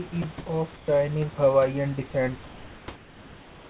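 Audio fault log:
0.22–0.24 s, sound dropped by the voice detector: for about 20 ms the speech gives way to a smooth, even hiss before resuming. The likely cause is the sender's voice activity detector judging the sound there to be background and halting transmission, so the receiver played generated comfort noise there. The gap is brief, set against band-limited audio with nothing above 4 kHz.
0.38–0.46 s and 0.76–0.88 s, comfort noise in place of the background: in two pauses, lasting 80 ms and 120 ms, the room noise is swapped for a flat, textureless hiss. The background sits about 22 dB and about 24 dB below the loud passages. The fill is about 4 dB louder than the real room noise in the first pause and about 4 dB quieter in the second, so the floor steps up and then down. This likely comes from discontinuous transmission, with the receiver synthesising noise roughly matched to the background.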